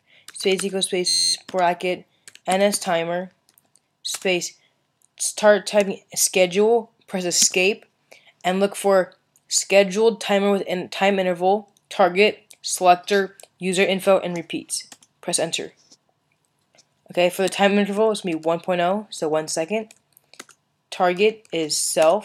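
From 1.08 to 1.34 s the system stalled while the audio hardware kept replaying the same ring buffer, a system hang loop. A slice about 11.6 ms long, which fits a 512-sample buffer, repeats 22 times at roughly 86 Hz. Because the loop is so short, the repeats fuse into a steady buzz pitched at that rate. Essentially no audio is lost, and playback resumes where it stopped once the hang clears.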